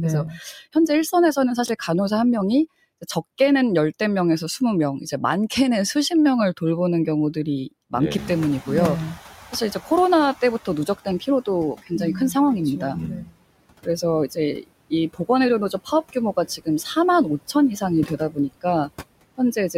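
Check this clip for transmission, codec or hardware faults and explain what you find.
Four faults show up, all tied to noise suppression except one ordering glitch near the start.

Noise suppressor artifacts run through the whole recording. The suppressor pulls steady background down by about 20 dB, frame by frame, so the noise floor dips in pauses and swells back under the talker. On a spectrogram the background appears as patchy, flickering speckles rather than an even haze. The waveform's quiet gaps pump up and down.

Speech cut by the noise suppressor happens six times: 0.39–1.37 s, 10.65–12.35 s, 12.94–13.37 s, 13.83–15.29 s, 15.7–16.16 s and 17.53–18.89 s. Each time the suppressor mistakes weak speech for noise and turns brief fragments down with it, by about 13 to 21 dB at the deepest. Consonants and word endings sound swallowed. A spectrogram shows faint or missing high-frequency consonant energy, and the waveform shows tails collapsing early.

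Chunks out of order occur at 1.66–1.69 s. A 10 ms chunk arrives two chunks late and plays after audio that should follow it. Nothing is dropped, but the sequence is scrambled, leaving three hard joins heard as a short jumbled stutter. The waveform shows abrupt discontinuities at the splice points. The spectrogram shows thin vertical broadband lines there.

Noise suppressor catching up covers 8.17–10.95 s. The room noise itself jumps by about 21 dB around 8 s, which is a real event in the room. The suppressor's noise estimate lags, so the louder background first passes through with less reduction. It then sinks over about 2.78 s as the reduction settles near 12 dB. A spectrogram shows a bright band of noise that fades gradually, and the waveform floor ramps down.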